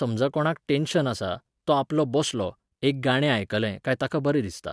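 Speech recording, no technical faults heard anywhere in it.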